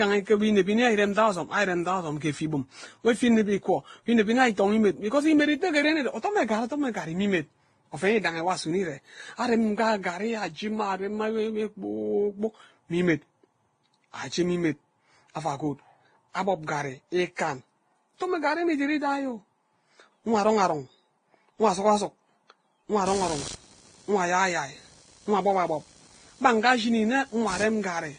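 Throughout the speech, transcoding between lossy codecs is the likely cause of a stacked, smeared quality. Nothing is present above 10.7 kHz, and swirly, watery artefacts sit on top of a second layer of grainy, pre-echo-like blur. That combination fits a low-rate Vorbis stage followed by Opus and then an older WMA encode. Each later encoder spent its bits reproducing the earlier damage, added its own, and kept the lowest bandwidth limit in the chain.

From 23.06 s to the end at 28.18 s, computer activity noise appears: a buzzing, scratchy pulse train at roughly 70 Hz, about 20 dB below the speech. It doesn't follow the rhythm or loudness of the talking. It comes from a computer's changing processor, graphics or mouse load disturbing the ground it shares with the audio circuit, so the interference rises and chatters with the machine's activity rather than with the sound being recorded.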